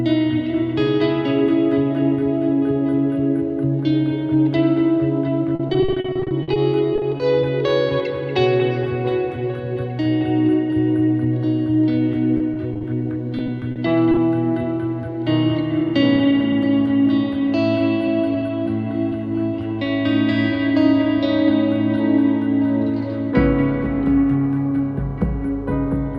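Repeated packet loss hits twice. From 5.55 to 7.22 s, 18 gaps (longest 50 ms) are patched by extending prior sound, filling about 28% of the stretch. From 12.38 to 14.19 s, 11 shorter gaps follow. Both passages turn choppy, with pieces missing.

Jitter buffer speed-up follows. The buffer had overfilled, so the receiver trimmed pitch-period slices to shrink delay: from 15.79 to 16.64 s the audio plays at 105% speed, then from 17.33 to 19.12 s at 103%. Pitch stays put while the 105% stretch feels hurried.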